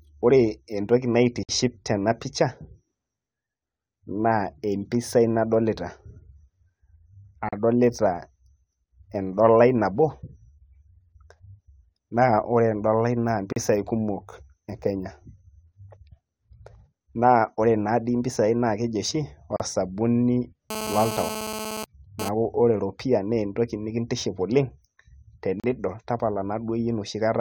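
Separately encoded pieces were joined without trimming the encoder delay and end padding, producing a gap at a join of encoded pieces. The speech breaks off at 1.43 s (55 ms), then at 7.49, 13.53 and 19.56 s (37 ms each), every 6 s, with smeared edges before continuing where it stopped.

From 20.70 to 22.29 s, a nearby 2G handset transferring data in bursts at 217 Hz had its radio pulses rectified by the audio circuit. This GSM phone buzz is a hard, raspy 217 Hz tone with many harmonics, about 8 dB below the speech, stuttering on and off with the data bursts.

The joining fault recurs at 25.60 s as another 37 ms gap in the speech.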